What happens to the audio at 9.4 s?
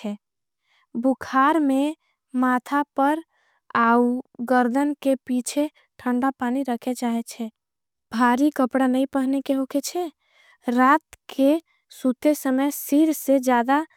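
Nothing goes wrong at 9.4 s; the speech carries on cleanly through that moment, with no dropout, click, distortion or other audible fault.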